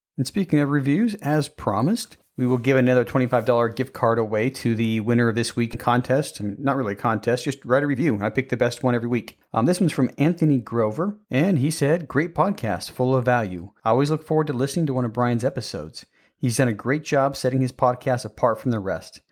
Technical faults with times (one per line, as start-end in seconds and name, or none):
5.73 skip ahead
6.41-7.10 jitter buffer speed-up
7.68-10.26 jitter buffer speed-up